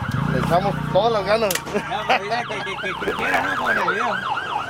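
From 2.96 to 3.82 s the audio shows a block size mismatch with truncation. A buzz near 92 Hz appears. The sound runs about 1.07 times fast. Each written block, which fits 512 samples, loses its tail before the next stage reads it.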